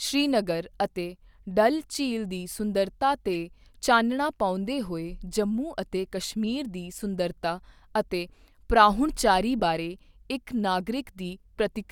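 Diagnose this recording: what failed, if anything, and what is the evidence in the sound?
Corrupt frame decoded, at 3.34 to 3.36 s, just after "ਝੀਲ ਦੀ ਸੁੰਦਰਤਾ" and before "ਚਾਨਣਾ ਪਾਉਂਦੇ ਹੋਏ", and again at 9.60 to 9.62 s, right after "ਅਤੇ ਪ੍ਰਾਹੁਣਚਾਰੀ". This is a codec-stage failure: damaged bits in the compressed stream were decoded as if valid, so misread gains and codes put energy in the wrong bands. Each event is a brief blip of about 20 ms peaking around -25 dBFS, which points to roughly a single frame the first time and a couple the second.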